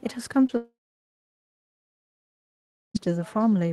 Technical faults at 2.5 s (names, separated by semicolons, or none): echo with no canceller; long network dropout